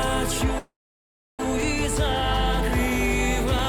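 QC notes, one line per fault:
0.58–1.40 s, call audio freeze: the sound stalls, a brief continuation fades into about 0.66 s of silence, then resumes where it stopped, adding about 0.8 s of delay. This is likely packets held up in transit draining the jitter buffer.
1.63 s and 3.59 s, dropped buffer (overrun): a small jump forward, about 5 ms of audio skipped, likely from samples overwritten before they were collected.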